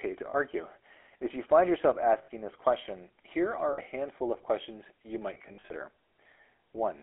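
The whole clip runs through the GSM full-rate codec, at what sounds like 13 kbps, squeezed into a 300 Hz to 3.5 kHz line band. The pulse-driven vocal tract model leaves the speech plainly buzzy and gravelly.

Then there are lost GSM frames. The decoder holds the last good frame and lets it fade, which gives a short, rough, metallic ring. The first is at 0.3 s, lasting about 40 ms. The next is at 2.18 s, about 100 ms long, right after "you find yourself". Another comes at 3.72 s, about 60 ms long, after "this question here are". The last starts at 5.34 s, after "handful of questions you", with about 220 ms of losses scattered over 360 ms and the longest run around 70 ms.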